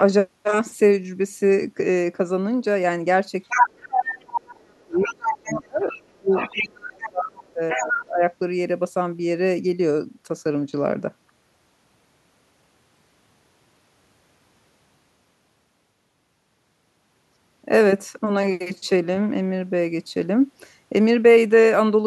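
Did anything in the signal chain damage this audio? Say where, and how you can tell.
Yes, in the call processing stage. The other side's voice leaking through is audible at 3.45–3.68, 4.09–4.14, 4.79–5.95, 6.29–6.63, 7.02–7.09 and 7.69–7.91 s. The first burst sits about 5 dB above the talker and the rest about 5 to 15 dB below. This is likely residual loudspeaker echo that the canceller left in the microphone signal.

Speech suppressed in double talk also occurs in call processing, from 3.51 to 8.26 s. The talker's level drops by up to about 30 dB, over roughly four seconds while the far voice is present. The echo canceller likely could not separate the two talkers and attenuated both together.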